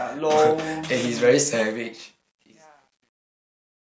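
Truncation distortion on a fade runs from 1.60 s to the end at 4.0 s, during the speech's fade-out, which begins at about 1.6 s. The fade was rendered at roughly 10 bits with no dither, so as the level drops the waveform collapses onto a few coarse steps. It turns gritty and is worst from 2.18 s to 4.01 s, at the quiet tail of the fade.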